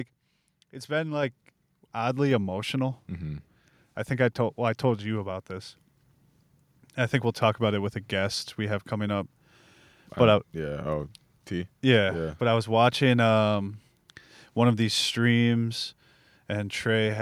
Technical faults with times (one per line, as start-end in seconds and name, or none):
1.23 microphone volume stepped up